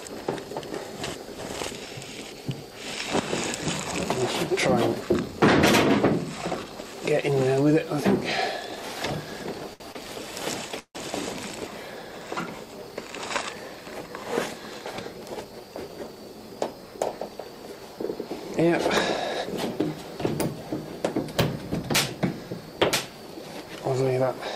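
Twice in quick succession the audio catches and holds a sound slightly too long, with a faint buzzy dip: from 9.73 to 9.83 s, stretched by 67 ms, and again from 9.92 to 9.98 s, by 28 ms. These are short stalls from a late packet. Each time the jitter buffer ran dry, the receiver sustained the last sound until data arrived, then continued from the same point with nothing lost. At 10.79 s the sound freezes into a fading buzz that drops to silence for its final 70 ms before resuming at 10.98 s. This call audio freeze inserts 159 ms of fill and skips nothing. The likely cause is packets held up in transit long enough to empty the buffer. From 14.71 to 16.13 s the audio then runs about 8% fast at unchanged pitch, sounding hurried. This is a jitter buffer speed-up: to work off the excess delay that built up, the receiver repeatedly trimmed pitch-period-sized slices, roughly 150 ms in total.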